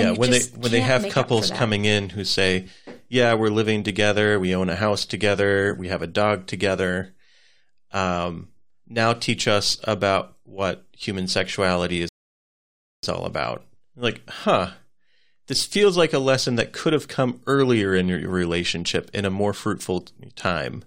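At 12.09 s, right after "about what human sexuality", there's a rebuffering stall: the player ran dry of downloaded audio and went silent for about 0.95 s until more arrived. The speech then picks up exactly where it stopped with "all about", so nothing's missing, just delayed.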